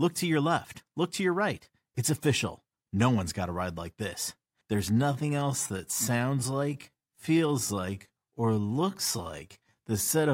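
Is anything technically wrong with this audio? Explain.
Yes. From 4.87 s to the end, just before "wheels in your", the speech has a time-stretched section, slowed to about 0.67 times its original pace. This is likely software stretching the audio to fill a length, keeping pitch by repeating short pieces of the waveform. Unlike a slowed playback rate, the pitch stays where it was, so the speech drags without deepening.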